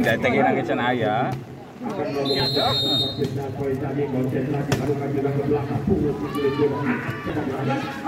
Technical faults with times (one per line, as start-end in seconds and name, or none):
2.40 audio missing between chunks
7.30 audio missing between chunks